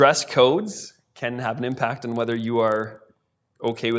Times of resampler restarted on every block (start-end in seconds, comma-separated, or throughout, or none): 1.72-3.98